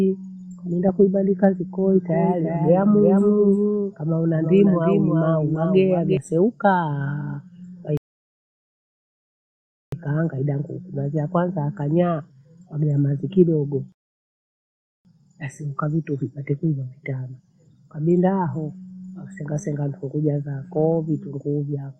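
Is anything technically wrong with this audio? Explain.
Yes, there are two kinds of fault in this speech clip.

From 1.89 s to 6.17 s, just after "kaminda kuibandika", there is a doubled audio track. A second full-band copy of the speech runs roughly 0.4 s behind the original and a few decibels quieter (about 5 dB down). It has no reverberant tail or room colouring, and it cuts in and out abruptly at both ends. That points to a second capture path or an edit that left two offset copies. The result is a hard, slapback-style echo over that stretch.

There are two rebuffering stalls, where playback ran dry and paused until more data arrived. The first runs from 7.97 s to 9.92 s and adds about 1.95 s of silence. The second runs from 13.92 s to 15.05 s, between "yakanyaa wagea mathi kidogo" and "basi ukavitu vipate kwiva", and adds about 1.13 s. Each time the audio drops to silence and then resumes exactly where it stopped. 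Nothing is lost, but the timing is stretched.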